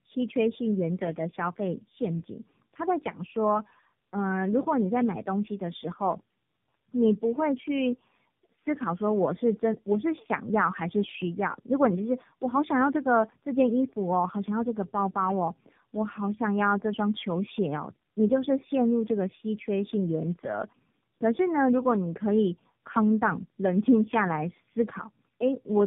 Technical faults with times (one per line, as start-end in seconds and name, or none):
0.00-25.87 tandem speech coding